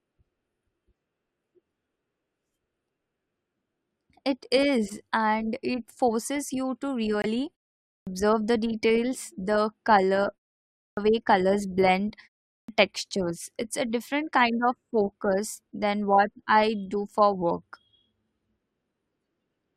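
At 7.22 s the speech drops into a sudden hole of 40 ms, cutting off abruptly and resuming at 7.26 s with timing intact. This is a corrupt frame muted: damaged compressed data was rejected by the decoder and replaced with silence, which fits two 20 ms frames.

Three times the speech begins abruptly out of silence with its opening sounds missing: at 7.94 s (0.13 s lost after a 0.46 s pause), at 10.85 s (0.12 s lost after 0.55 s), and at 12.57 s (0.11 s lost after 0.37 s). This is a clipped start after a pause. The output device went idle during each gap and needed time to wake before it could play again, so the first part of the sound was swallowed.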